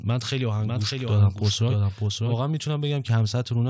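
Speech clip carried over a G.722 call path, band-limited to 8 kHz. A doubled audio track runs from 0.6 to 2.36 s: a dry full-band copy trails roughly 0.7 s behind at about 5 dB lower, likely from a second, slower capture path.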